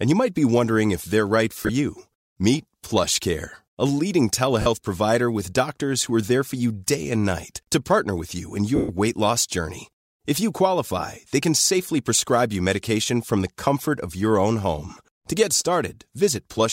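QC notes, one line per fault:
1.61–1.69 s, lost LE Audio frames: about 50 ms dropped in bursts over 80 ms, longest run around 20 ms; the LC3 decoder refills each gap with the last spectrum under random signs, so speech turns briefly to a rough, noisy flutter.
4.62–4.66 s, lost LE Audio frames: a 40 ms gap concealed the same way, heard as a short smeared blip.
8.76–8.89 s, lost LE Audio frames: 130 ms lost; the repeated spectrum smears, then fades toward silence.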